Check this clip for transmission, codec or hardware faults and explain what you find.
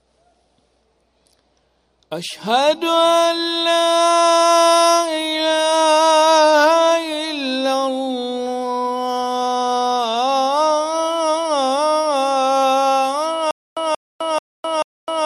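One transmission fault is present: a stutter with silent gaps from 13.51 s that runs to the end. A fragment of about 180 ms plays, then about 257 ms of digital silence follows. The pattern repeats at an even 438 ms period, four times. The cause is likely a stalled player or stream that replayed its last buffered fragment on each retry and then ran dry. Whatever audio belonged in that stretch is lost.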